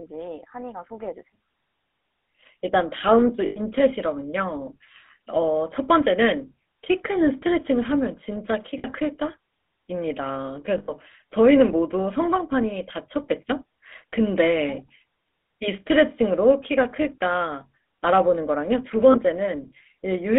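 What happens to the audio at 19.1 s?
At 19.12 to 19.15 s there are lost GSM frames, which fits a single dropped 20 ms frame. The decoder fills the gap by repeating the previous good frame's vocal-tract and excitation settings, so the sound briefly holds as a short, rough metallic ring instead of cutting out. Underneath, the GSM full-rate codec is active as it is throughout: a 13 kbps regular-pulse-excited coder on a line band of 250 Hz to 3.6 kHz, giving plainly audible buzzy, gravelly roughness and no content above 4 kHz.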